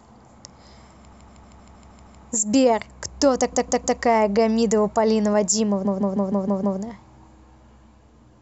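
Repeated frames: a block of compressed speech about 157 ms long, which fits six frames, was sent more than once, so the decoder replays it as a stutter. This happens seven extra times from 1.11 to 2.21 s, three from 3.52 to 3.99 s and six from 5.84 to 6.78 s, adding 1.1, 0.47 and 0.94 s.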